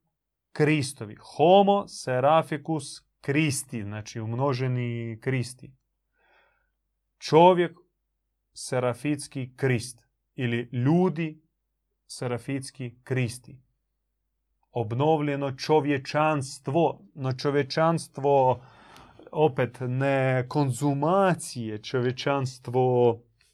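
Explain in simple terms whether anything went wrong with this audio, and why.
Nothing went wrong with this audio, as the speech carries on without any audible fault.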